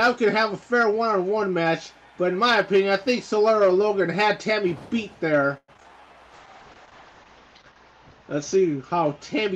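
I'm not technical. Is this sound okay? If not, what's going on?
No. For about a quarter of a second, from 5.57 to 5.86 s, the sound turns choppy, with pieces missing. This is repeated packet loss. Small chunks of the audio went missing five times in quick succession, the longest about a tenth of a second. Each time, the receiving side covered the hole by stretching out the sound it had just played. About half of that stretch is this patched-in filler rather than the real thing.

Right after, from 5.88 to 6.14 s, the sound drags. It plays at roughly four-fifths of normal speed but keeps the same pitch, so it feels drawn out. This is a jitter buffer slow-down. The receiver keeps a small reserve of incoming audio to smooth over delays. That reserve was running low, or the receiver had just decided to hold a bigger one, so it repeated tiny slices of sound to build it up, adding about 0.06 s.

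From 6.34 s to the end, the sound becomes rough, watery and muffled, and the crisp top end disappears. This is a call bitrate drop. The connection judged its bandwidth to be much lower, so the audio was squeezed into far less data and the highest sounds were cut off to save space. It reaches its worst for about a second, and the sound stays muffled until the clip ends.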